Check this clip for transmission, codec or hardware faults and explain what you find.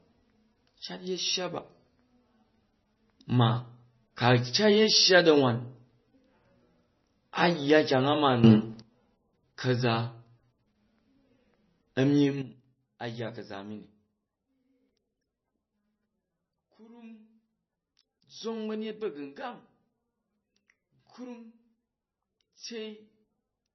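Two problems here, so it's not clean. Throughout, the speech is band-limited with nothing above 5.9 kHz and sounds watery and swirly. That's likely heavy MP3 compression at a very low bitrate, around 20 kbps. There's a sudden gain jump up about 12 dB from 8.44 to 8.82 s, then a drop of about 12 dB from 12.42 s to the end. Voice and background noise shift level together, likely from gain applied without a ramp.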